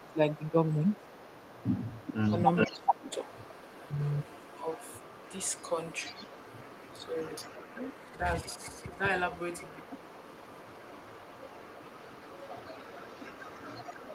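A speech recording with two echo-canceller faults. Speech is suppressed in double talk from 0.0 to 1.06 s, 1.97 to 3.12 s, 8.11 to 8.25 s and 8.71 to 8.99 s, with dips of about 15, 20 and 5 dB. The likely cause is the canceller ducking the near talker while the far side also speaks. Unlike packet dropouts, the voice thins, sinks or cuts out in pieces. An echo leak runs from 0.0 to 2.11 s and from 2.54 s to the end, at about 25 dB and then about 20 dB below the speech. It is a distinct copy arriving 421 ms late, not a reverberant smear, most likely from incomplete cancellation of a loudspeaker pickup.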